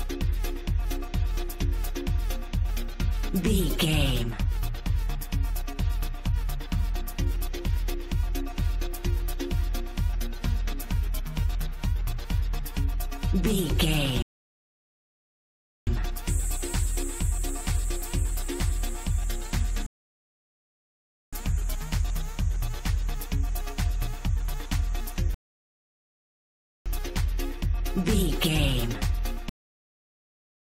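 The player's download fell behind three times, causing rebuffering stalls: playback ran out of fetched audio and waited for more before continuing. Each stall drops the sound to silence, then picks up exactly where it left off, so nothing is missing but the timeline stretches. The gaps run from 14.22 to 15.87 s (adding 1.65 s), 19.86 to 21.33 s (1.46 s) and 25.34 to 26.86 s (1.51 s). Near the end, the final buffers were never written out, producing a cut-off end. At 29.49 s the audio stops abruptly in the middle of a sound, with no natural decay, and falls straight to digital silence that lasts until the clip finishes. Whatever was sounding at that moment is simply severed rather than fading or resolving.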